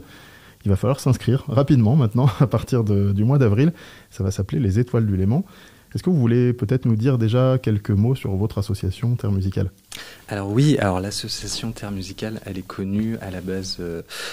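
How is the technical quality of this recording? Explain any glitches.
No glitches can be heard anywhere in the recording; the signal stays steady and intact throughout, with no dropouts, distortion or interruptions to explain.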